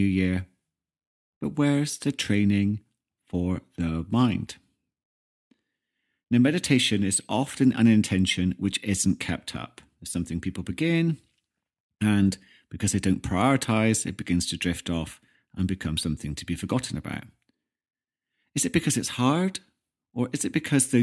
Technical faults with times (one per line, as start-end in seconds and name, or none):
none